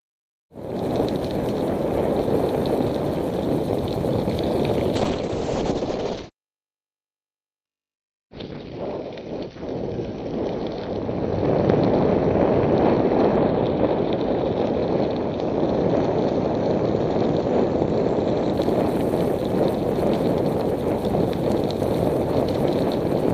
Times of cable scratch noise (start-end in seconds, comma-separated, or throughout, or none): none